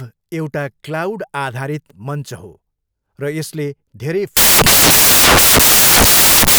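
At 4.37 s, samples built from the wrong bytes turn speech into loud, harsh broadband noise until the end, filling the spectrogram across all frequencies.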